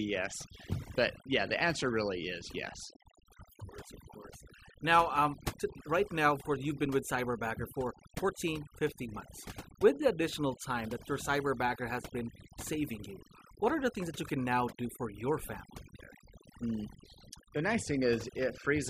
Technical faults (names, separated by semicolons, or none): overdone noise removal